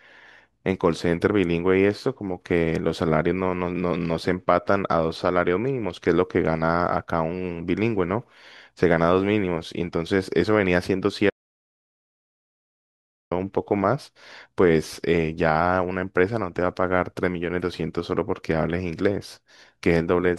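At 11.3 s the speech cuts to total silence, an audio dropout to silence. It returns at 13.31 s. About 2 s is lost, likely from a dropped input link.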